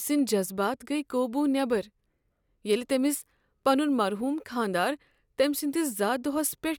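No technical faults can be heard in this recording.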